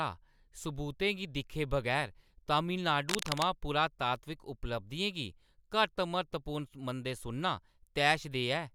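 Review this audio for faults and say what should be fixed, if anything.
Cable scratch noise runs from 3.09 to 3.45 s. Dense, ragged scratching sits over the speech, only a few dB below it. A worn cable or connector shifting likely caused it, its contact resistance jumping rapidly. Replace worn leads and secure cables during recording.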